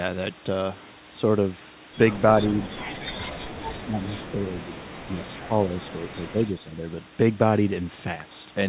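Between 2.66 and 6.75 s the speech level dips in five places: 2.66–2.89 s, 3.15–3.64 s, 3.82–4.85 s, 5.06–5.21 s and 5.4–6.75 s. The first dip is deepest, around 20 dB, the second around 15 dB, and the last three around 10 dB. The talker sounds thinned and partly cut out. The likely cause is speech suppressed in double talk: while the far end spoke, the echo canceller treated the near talker as loudspeaker echo and attenuated it.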